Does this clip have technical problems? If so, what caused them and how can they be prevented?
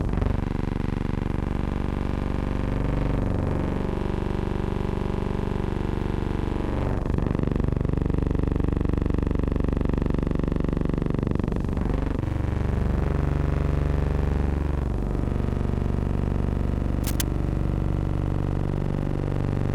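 Yes. From 17.04 to 17.23 s, a burst of scratching, rustling noise sits over the sound for about a fifth of a second, fairly prominent at roughly 10 dB below the signal. This is cable scratch noise, likely from a worn cable, connector or control being moved, so that its contact resistance jumped around rapidly and added dense, uneven crackle to the audio. Checking and replacing worn leads and connectors, and securing cables so they don't shift during recording, prevents it.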